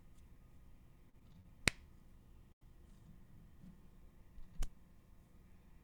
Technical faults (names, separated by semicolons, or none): repeated stalls (stutter); short stall from a late packet